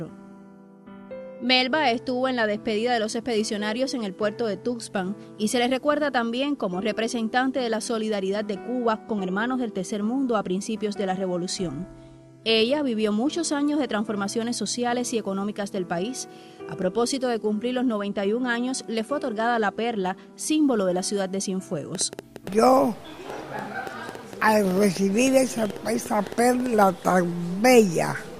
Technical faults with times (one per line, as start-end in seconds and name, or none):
4.98 dropped samples
13.01 dropped samples
16.82 dropped samples
21.95-26.84 train of clicks